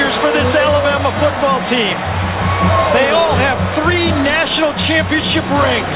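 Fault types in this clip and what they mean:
No technical faults turn up in this audio; it carries the expected narrowband character of a call path running at 64 kbps, with nothing above 4 kHz.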